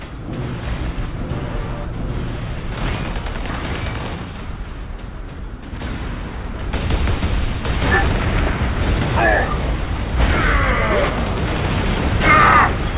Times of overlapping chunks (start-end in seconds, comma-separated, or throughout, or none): none